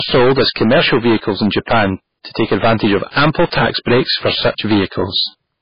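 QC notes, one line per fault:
Throughout: hard clipping. The speech is driven about 19 dB past full scale, so roughly 15% of all samples are flattened. Every loud syllable carries harsh fuzz.
Throughout: low-bitrate audio saved at a high bitrate. Nothing sounds above 5.1 kHz, and the first encoding's codec artefacts remain. The likely cause is a 16 kbit/s MP3 re-encoded at a high bitrate.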